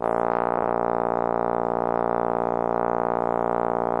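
Right from the start the music has a watery, swirly quality, with the top end shaved off at a fixed point and faint detail fading in and out from moment to moment. Cymbal-like highs turn metallic and chirpy, and attacks lose their snap. That's plainly audible MP3 compression, likely from a low bitrate somewhere around 64 kbps, where the encoder runs short of bits and starts dropping the weaker parts of the spectrum.

Between 0.57 and 0.69 s there's a brief garbled flutter. That's frames out of order: two neighbouring runs of frames, each about 52 ms long, which fits two MP3 frames apiece, got decoded in swapped order. So that short stretch plays with its halves exchanged, though the timing carries on with nothing lost.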